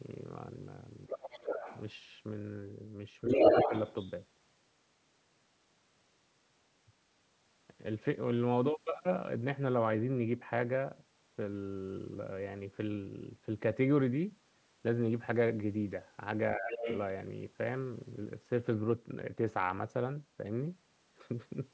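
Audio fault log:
1.08–1.81 s, 3.27–4.11 s and 16.71–16.99 s: other side's voice leaking through. A second voice surfaces under the talker. It sits roughly 5 dB below the speech in the first and last stretches, but in the 3.27 s stretch it rises to about 5 dB above it. This is likely loudspeaker playback that the echo canceller failed to subtract from the microphone. It is a separate voice added to the audio, not a dip in the talker's own level.
1.09–1.43 s, 3.23–3.72 s and 16.56–16.87 s: speech suppressed in double talk. Each time the leaked voice overlaps the talker, the talker's level sags for roughly 300 ms. The drop is about 5 dB in the first two spots and about 15 dB at 16.56 s. This is likely the echo canceller ducking both voices when it could not tell them apart. Unlike a codec or network dropout, the dips line up with the second voice.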